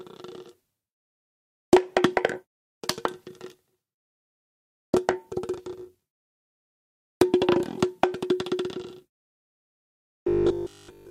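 A recording of everyday sounds where new audio likely stopped arriving in time from 9.44 s to the end at 11.10 s, so a roughly 20 ms buffer was looped over and over in place of the real signal. Essentially all of that stretch is repetition, producing robotic sound from repeated short buffers: a rigid, metallic buzz fixed at 50 Hz.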